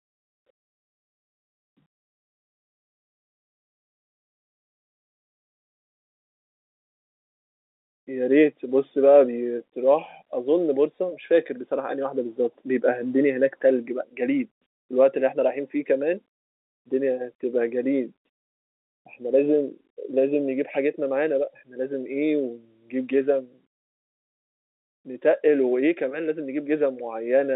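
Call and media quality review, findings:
No faults found.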